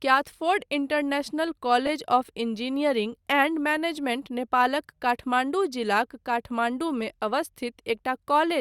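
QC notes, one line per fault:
1.86–1.89 s, frames out of order: two adjacent slivers of sound, each about 10 ms and consistent with single frames, play in swapped order, giving a brief garbled flutter; unlike a dropout or repeat, nothing is lost or doubled.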